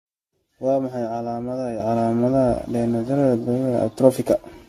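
Generation loss runs through the whole speech clip: the band stops at 14 kHz, and the sound is swirly, hollow and smeared, with softened consonant attacks. This is likely repeated lossy re-encoding, about ten passes, consistent with an AAC-LC chain at 64 kbit/s, each pass requantising on a shifted frame grid so the damage accumulates.

A sudden gain jump arrives at 1.8 s and holds to the end. The voice and the background noise rise together by about 11 dB in a single step, likely a digital gain change applied without any ramp, so the level leaps instantly instead of fading.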